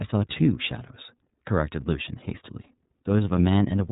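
The whole speech clip has passed through the iLBC codec, coding each frame independently in a way that fits 30 ms frames at about 13 kbps. Nothing above 3.8 kHz survives, so the voice sounds narrowband, boxy, slightly rough and synthetic, with plainly audible coding damage.

From 1.16 s to 3.37 s, one channel runs late by roughly a single sample, about 0.02 ms, before the two are summed to mono. This channel-delay comb filtering puts its first cancellation notch near 20 kHz, so it only dulls the top end.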